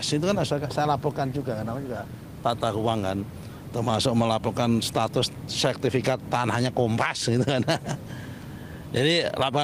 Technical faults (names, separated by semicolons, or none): none